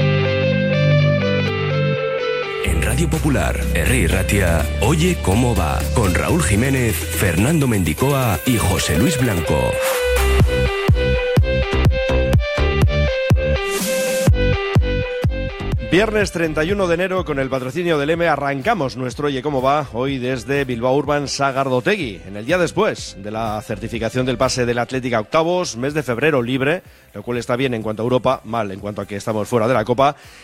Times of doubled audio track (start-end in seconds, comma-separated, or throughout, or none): 0.00-1.48